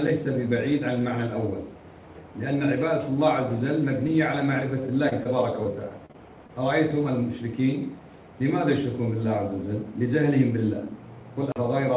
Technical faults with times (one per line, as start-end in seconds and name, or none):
4.81-4.85 short stall from a late packet
5.09-5.27 short concealed packet loss
5.63-6.51 repeated packet loss (robotic sound)